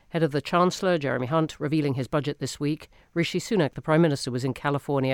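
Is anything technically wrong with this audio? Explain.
No, nothing technically wrong can be heard in this speech recording.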